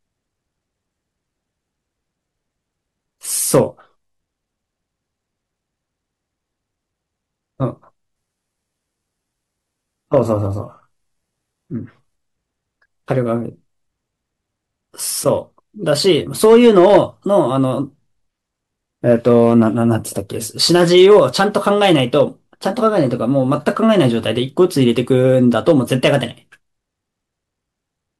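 From 8.16 to 12.16 s, an adaptive stream at a lower bitrate took over: the speech loses everything above 11.8 kHz and codec artefacts rise, switching suddenly without a gap.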